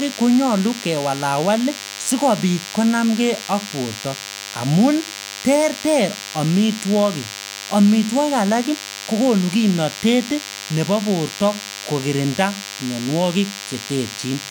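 DECT cordless phone buzz runs through the whole recording, from the first moment to the last. A DECT handset or base station close to the recording chain transmits a short radio burst every 10 ms, and the audio circuitry rectifies those bursts into the signal, producing a repeating pulse at 100 Hz. It sounds like a steady, thin buzz rich in harmonics, sitting roughly 15 dB below the speech.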